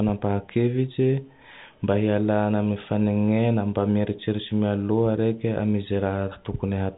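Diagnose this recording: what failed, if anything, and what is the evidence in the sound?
Nothing failed: the speech comes through the call path intact, with no content above 4 kHz as G.711 mu-law at 64 kbps would give, and nothing else in the sound points to a fault.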